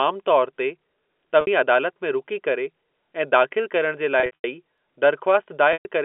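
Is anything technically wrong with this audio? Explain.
Yes. The speech has two kinds of fault. It comes through a G.711 telephone channel, and its narrow band of about 250 Hz to 3.4 kHz is heard cleanly.

Packet loss with pitch repetition occurs at 1.41 to 1.47 s, at 4.20 to 4.44 s just after "ऐं दाख़िलु करणु जे", and at 5.73 to 5.85 s. About 60, 180 and 120 ms of audio went missing. Each time, the receiver repeated the last pitch period to fill the gap. The first gap sounds like a briefly held, buzzy tone. The later gaps are longer, with runs up to 90 ms in the second, and they fade toward silence before the speech cross-fades back in.

Dropped samples cause a single sharp click at 4.78 s. A fraction of a millisecond of the stream is missing, so the waveform jumps straight to a later value. The gap is far too short to remove any sound. Only the jump is heard. A brief transfer glitch is the likely cause.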